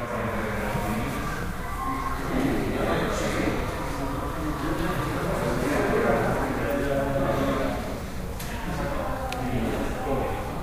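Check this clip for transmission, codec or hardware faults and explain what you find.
One fault: a repeated buffer at 0.73 s. It sounds like a click or brief buzz, as a 1.45 ms piece, fitting a 64-sample buffer, plays three times with hard joins because fresh audio arrived late.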